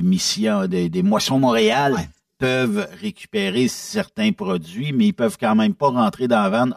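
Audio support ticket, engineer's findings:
Channel delay (comb filtering), whole clip: speech hollow and phasey. One channel lags around 5 ms before the mono sum, cancelling at evenly spaced frequencies, first notch near 100 Hz. Spectrogram shows fixed dark horizontal bands, roughly 200 Hz apart.

Drift correction step, 1.38–2.43 s: speech abruptly runs 5.92% fast and 99.6 cents sharp, about a semitone, then snaps back. Likely clock-matching resampler adjusting buffer fill. Spectrogram shows harmonics jumping up, then dropping; waveform shows compressed periods.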